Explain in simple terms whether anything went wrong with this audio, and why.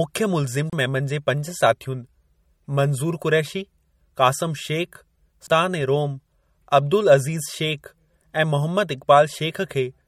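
Throughout this speech clip there is plainly audible watery, swirly coding damage with the top treble cut off, likely from MP3 compression squeezed into too few bits.

There are two CD skips. At 0.70 to 0.73 s, just before "मेमन जे पंज साथियुनि", the sound briefly drops out and resumes at a different point. The same thing happens at 5.47 s with a shorter gap.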